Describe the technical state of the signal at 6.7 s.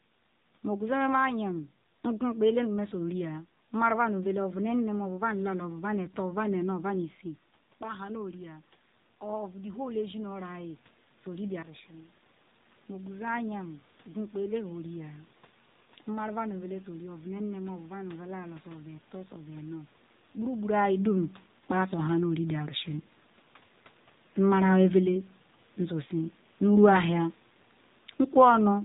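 At 6.7 s you're hearing the AMR narrowband mobile codec, which runs through the whole clip. The speech has been squeezed into a phone-style band, so nothing gets through above 3.8 kHz, and the codec is rebuilding the voice from a vocal-tract model driven by sparse pulses. The damage is plainly audible: a buzzy, synthetic edge that points to one of the lower modes, something like 7.4 kbps. The level shift from the talker moving, right around 7 s, is just the person, not the system.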